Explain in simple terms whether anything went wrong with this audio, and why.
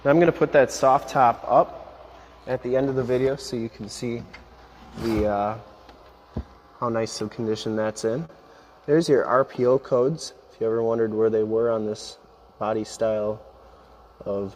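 The sender's clock runs roughly 4% slower than the receiver's. That is a clock drift between sender and receiver, which starves the receiver of audio steadily rather than in one burst. The effect runs through the whole clip. Unlike a network dropout, nothing goes missing here.

To keep in step, the receiver makes repeated timing corrections from 0.07 to 14.33 s, padding the sound with tiny repeated pieces. Playback runs at 97% speed and gains about 0.4 s overall. If heard at all, it comes across as an unsteady, slightly dragging tempo, not a clear gap.

At 8.25 s there is a short stall from a late packet. The receiver held the last sound for 38 ms until the packet arrived, so a sound lingers briefly. Nothing is lost, and play resumes exactly where it stopped.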